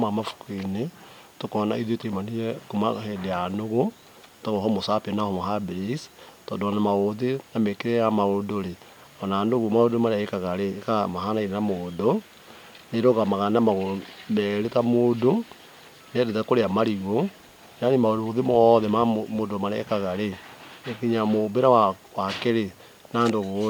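No technical faults are audible.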